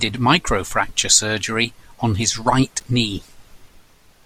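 Loose connector crackle at 2.79 to 2.82 s, after "surgery on his right": a worn contact intermittently breaking chops the speech into a scratchy burst.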